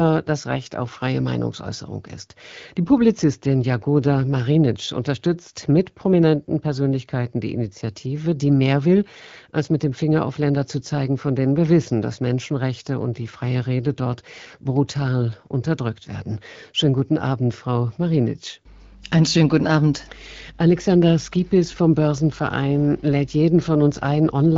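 No technical faults are present; the speech passes through AMR wideband (HD Voice) coding at 12.65 kbit/s, which leaves only light codec damage.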